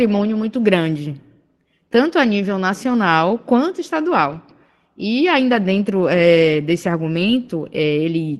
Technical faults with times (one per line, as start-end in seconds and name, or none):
2.89-2.95 lost packet rebuilt from error correction
4.25-4.35 lost packet rebuilt from error correction
7.09-7.23 lost packet rebuilt from error correction